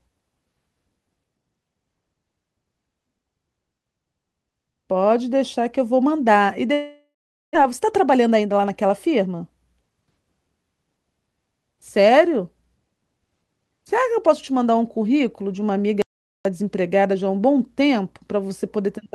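Long network dropout, 6.73 to 7.57 s: the speech smears into a fading buzz, then about 430 ms of silence. Likely lost packets; some 600 ms never plays.

Jitter buffer speed-up, 7.65 to 9.40 s: speech runs 110% fast at unchanged pitch as the receiver trims around a fifth of a second of pitch periods to drain built-up delay.

Audio dropout to silence, 16.02 to 16.45 s: the sound cuts abruptly to silence for 433 ms, with no room tone. This is likely a lost input.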